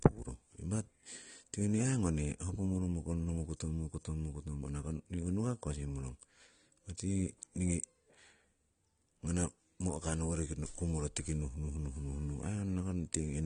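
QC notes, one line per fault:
Throughout: AAC compression. Nothing is present above about 9.7 kHz, so the speech sounds dull and band-limited, with plainly audible coding damage across the whole clip. The likely cause is lossy AAC-LC encoding at a low rate, which fits roughly 32 kbps. At that rate the encoder cannot afford the upper spectrum. It drops everything above the cut-off and quantises the remaining frequency lines coarsely, and that coarse quantisation smears the detail that is left.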